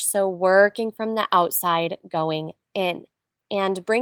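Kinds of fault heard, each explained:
Nothing in this speech clip stood out as a fault on listening.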